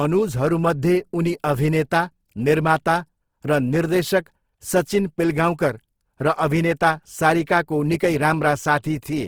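Throughout this speech clip, the likely cause is Opus compression in its music (CELT) mode, starved of bits at a rate that points to around 16 kbps. The encoder keeps each band's energy but, lacking bits for detail, fills bands by folding lower ones or with noise, so the damage is plainly audible as rough, grainy, noisy texture in the speech rather than swirling holes. Bandwidth stays full, with content reaching about 20.4 kHz.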